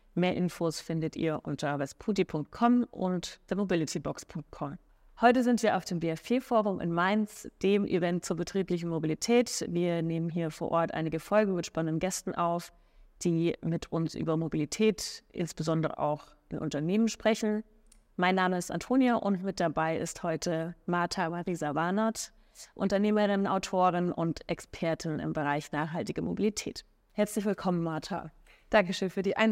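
Listening closely to the speech recording, nothing stood out as a technical fault at any point.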